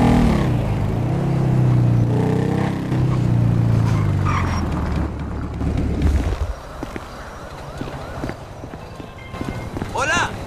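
At 2.04 to 2.92 s, 5.07 to 5.61 s and 8.33 to 9.34 s the level abruptly drops by about 6 dB and then snaps back, likely one channel dropping out. The waveform shows sudden step-down blocks, and the spectrogram darkens uniformly across frequencies.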